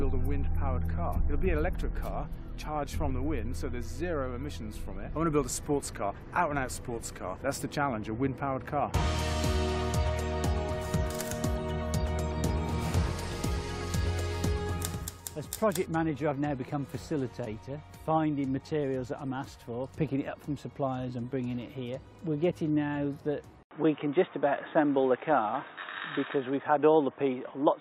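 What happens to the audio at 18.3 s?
Nothing goes wrong at 18.3 s; the audio plays through that moment intact, with no dropout, click, distortion or other fault.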